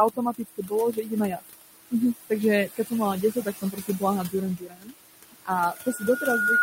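A noise suppressor runs throughout this speech clip, pulling down what it judges to be steady noise by about 19 dB frame by frame, so the room noise, which sits about 9 dB below the speech, drops away between phrases and surges back beneath them. The same suppressor also mistakes parts of the speech for noise, causing speech cut by the noise suppressor at 0.14–0.72 s, 0.93–1.11 s, 2.67–2.92 s, 3.32–4.02 s, 4.57–4.95 s, 5.31–5.50 s and 5.74–6.02 s, where soft sounds and endings sink by up to about 22 dB and come across as swallowed. From 5.63 s to the end, a microphone picking up its own loudspeaker closes a loop with gain above one at 1.4 kHz, and a loudspeaker feedback squeal swells over roughly a second into a tone that rises about 5 dB above the speech.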